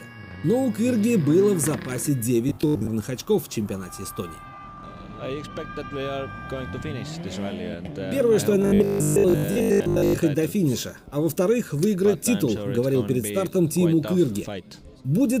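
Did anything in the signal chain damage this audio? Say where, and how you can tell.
Yes. There is robotic sound from repeated short buffers at 2.49–2.93 s and 8.62–10.18 s, likely from starved driver buffers. A rigid 50 Hz buzz, fitting replayed 20 ms chunks, replaces much of the sound, rather than leaving silent dropout gaps.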